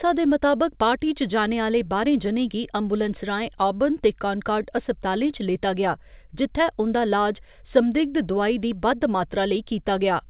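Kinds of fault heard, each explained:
No kinds of fault are heard in this speech clip.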